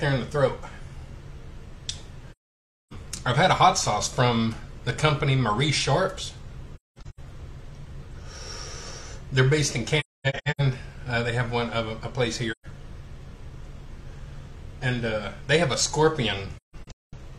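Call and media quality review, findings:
AAC frame loss with muting: soft-edged dropouts at 2.31–2.93, 6.75–7.20, 9.99–10.61, 12.51–12.66 and 16.57–17.14 s. The 6.75, 9.99 and 16.57 s holes are choppy, with runs up to roughly 0.3 s. Decoder zeroes missing frames, and window overlap fades the edges.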